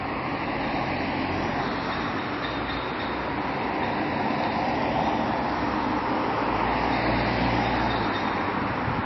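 Throughout, the audio has nothing above 5.8 kHz and a watery, swirling texture that a plain low-pass filter wouldn't cause. This is likely heavy MP3 compression at a very low bitrate.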